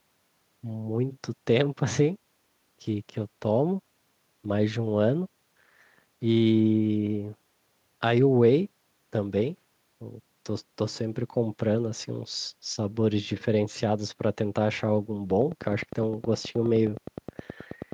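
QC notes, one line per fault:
15.31–17.93 s train of clicks: about thirty near-identical ticks at a steady 9.6 per second, peaking a few dB above the speech, likely nearby equipment interference; evenly spaced vertical spectrogram lines, regular waveform spikes.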